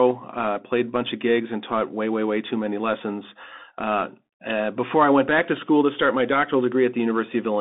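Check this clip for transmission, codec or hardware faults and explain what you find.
One fault runs through the whole clip. Throughout, the speech sounds narrow and muffled, with nothing above 3.8 kHz, scratchy s sounds and a granular hiss: the Bluetooth CVSD headset codec, whose one-bit up-or-down steps, fitting a 64 kbps stream, cannot keep up with fast, loud changes.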